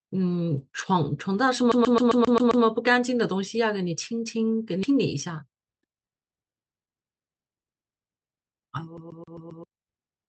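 Speech clip, carried over an Opus call path with its audio band ending near 8 kHz. A CD stuck on one turn, with the laser jumping back one track each revolution, makes a roughly 133 ms slice repeat seven times from 1.72 to 2.65 s and five times from 8.97 to 9.64 s, a fast, even stutter with brief mutes. A skip ahead at 4.83 to 4.85 s, where queued audio was dropped, cuts out about a second of speech and splices both sides together with no gap. Jitter buffer speed-up then trims pitch periods to shed about half a second of built-up delay, making the speech from 4.92 to 8.67 s run at 114% speed with unchanged pitch, sounding hurried.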